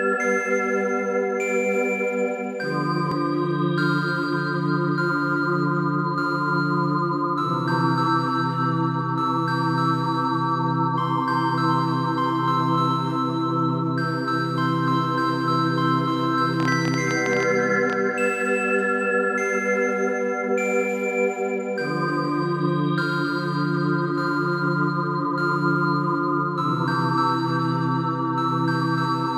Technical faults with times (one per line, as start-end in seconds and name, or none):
16.60-17.94 train of clicks